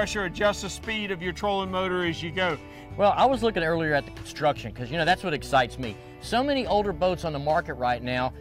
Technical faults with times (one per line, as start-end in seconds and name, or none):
none